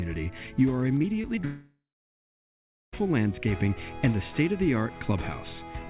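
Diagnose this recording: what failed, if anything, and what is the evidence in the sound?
Repeated packet loss (robotic sound), 0.98 to 1.45 s, at the network stage. Five short holes, the longest 23 ms, are each patched by stretching the preceding sound, so about 19% of that span is synthetic fill. This gives a choppy, robotic texture over the call's 4 kHz-limited audio.

A long network dropout follows, from 1.45 to 2.94 s. The last sound is carried on as a fading concealment tail, then about 1.1 s of silence, before audio resumes without the lost section. The likely cause is a stall in packet delivery.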